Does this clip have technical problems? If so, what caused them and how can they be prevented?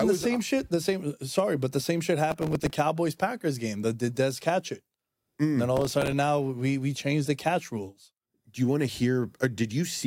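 Yes. Gritty tearing crackle at 2.31–2.72 s, after "but the same shit", and at 5.77–6.12 s, before "now we we changed". This is processor overload crackle: an overloaded processor missed many buffers of a few milliseconds each, replaying stale audio. Prevent it by reducing processing load or enlarging the buffer.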